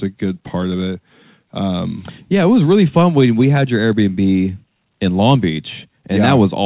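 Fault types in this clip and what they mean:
Nothing stood out on listening to this speech recording.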